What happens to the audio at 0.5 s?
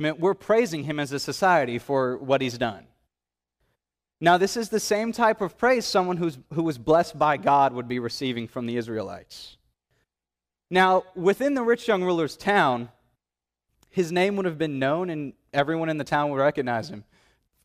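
Nothing goes wrong at 0.5 s; the speech there is intact, with no dropout, click, distortion or other fault.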